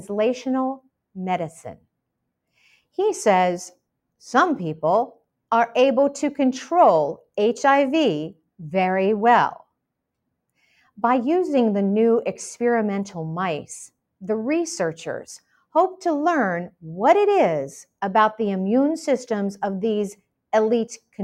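No technical faults can be heard anywhere in the clip. Nothing in the audio calls for a time stamp or a description of something gone wrong.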